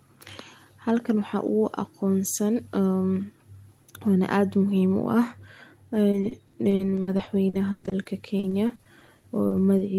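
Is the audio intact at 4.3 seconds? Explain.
Yes, the audio is intact at 4.3 seconds, with no fault at that moment.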